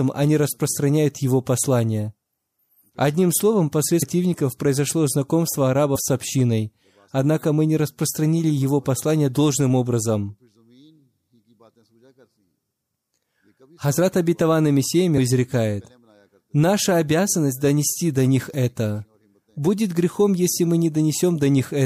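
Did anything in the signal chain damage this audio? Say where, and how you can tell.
Yes, compressed frames were skipped at the decode stage. The speech jumps ahead at 4.01 s (before "произошло знакомство"), 5.95 s (before "с общиной однако мы") and 15.17 s, losing roughly 300, 50 and 200 ms. Those are whole 26.1 ms frames, and the overlap leaves soft blips rather than clicks.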